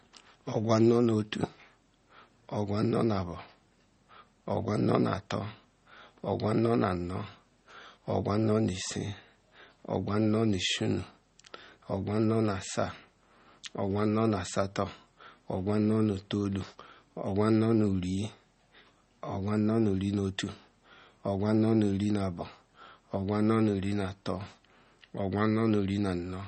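Speech, with plainly audible MP3 compression damage throughout: the treble stops sharply at about 8.4 kHz, weak frequency components flicker on and off to give a watery, swirly texture, and s sounds chirp metallically. This likely comes from a low-bitrate encode, consistent with around 32 kbps.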